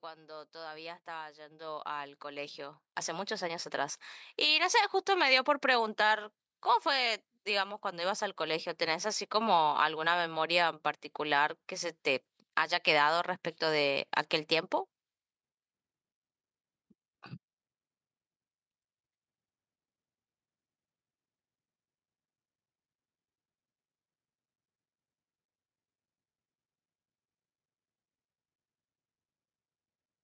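From 0.05 s to 5.01 s, automatic gain rising occurs: the gain control judged the incoming speech too quiet and kept pushing its gain upward, by about 19 dB in total, over those five seconds. The voice and the room noise behind it swell together, so the opening sounds faint before climbing steadily to full level, with the background lifting in step. The call microphone processing is audible as a band limit, with nothing above 8 kHz.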